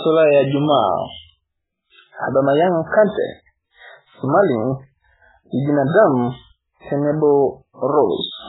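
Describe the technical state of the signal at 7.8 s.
At 7.8 s the speech sounds dull, watery and swirly, with nothing above about 3.8 kHz. This is heavy MP3 compression present throughout the clip, likely from a bitrate as low as about 8 kbps, which forces the treble cut and strips weak spectral detail frame to frame.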